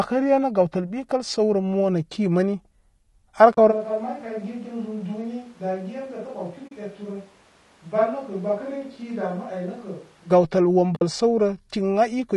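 From the start the speech sounds rough and grainy, with a hiss-like fill between the harmonics and a top band that sounds thin and artificial. The damage is plainly audible throughout and is likely low-delay AAC compression, the AAC-ELD kind used for video calls. Its short frames separate the pitch harmonics poorly, so at a rate that sounds like about 32 kbps the encoder cannot keep the finer structure.

At 3.53 s the sound fades into a soft-edged hole lasting 40 ms, to 3.58 s, and fades back in. This is AAC frame loss with muting: the length fits two lost frames whose spectrum the decoder set to silence, and the overlapping windows smooth the edges.

At 3.73 s the speech abruptly turns roomy and hollow, loses bass, drops about 10 dB, and room noise rises to around 25 dB below the speech. It stays that way until an equally sudden return at 10.29 s. This is a switch to a distant microphone, likely because the close microphone's signal dropped out and a farther one, such as a camera's, filled in.

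Inside that stretch, at 6.67 s, a second muted gap of 40 ms, to 6.72 s, again fits two lost frames. At 10.95 s a longer one of 60 ms, to 11.02 s, fits three lost frames. Both have the same gentle fade-out and fade-in of AAC frame loss with muting.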